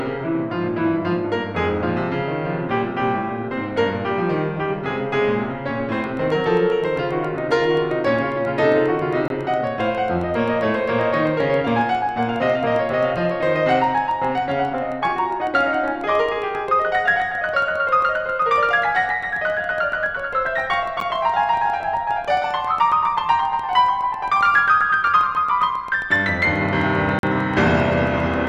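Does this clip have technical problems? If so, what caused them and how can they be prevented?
Yes. From 6.04 s to the end there's a train of clicks, a steady tick about 7.4 times a second, around 150 in all, roughly as loud as the music itself. That regular pattern likely comes from interference from nearby gear or a faulty connection or power supply. Moving cables and equipment apart and checking the interface and its grounding should stop it.

There are also three blocks of digital silence: 9.28 to 9.30 s (21 ms), 21.00 s (11 ms) and 27.19 to 27.23 s (43 ms). Each is a hard cut to silence and back with no fade. The longest one opens a short hole. The lengths fit 1024-, 512- and 2048-sample buffers that weren't filled in time. A larger buffer and a lighter processing load would keep the output fed.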